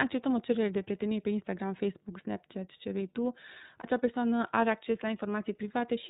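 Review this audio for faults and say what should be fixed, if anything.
The whole clip runs through the iLBC codec: nothing above 4 kHz, and speech sounds slightly rough and synthetic, which fits the 13.33 kbps mode with 30 ms frames. Use a wideband codec if the link allows it.

There are lost iLBC frames from 3.81 to 3.86 s, between "ce vrei tu" and "persoană are acces la". The decoder covers the gap with a brief buzzy held vowel, which fits one 30 ms frame concealed, then recovers straight away. Add jitter buffering or forward error correction to cut packet loss.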